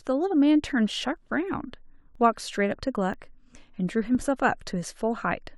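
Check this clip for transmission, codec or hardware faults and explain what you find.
There is one fault type, an overlap between stream segments, at 1.17, 2.15, 3.14 and 4.15 s. Segment timestamps overlap, so 6 to 19 ms of speech is discarded at roughly one-second intervals, producing brief clicks or skips.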